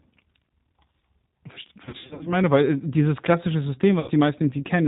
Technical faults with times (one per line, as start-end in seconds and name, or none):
0.00-4.87 G.729 codec
1.85-2.33 VoIP packet loss concealed by the speech codec
4.00-4.11 VoIP packet loss concealed by the speech codec